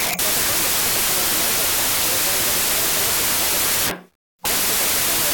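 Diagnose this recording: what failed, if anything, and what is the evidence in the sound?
A wrong sample width at the sample-format conversion stage: audio written as 16-bit integers is being read as packed 24-bit integers. Each decoded sample straddles parts of neighbouring 16-bit values, so most amplitudes are nonsense and only some carry the real signal's top bits. From start to finish the speech sits buried under loud, harsh noise, and because three bytes are consumed per sample instead of two, it runs 1.5 times too fast with pitch raised to match.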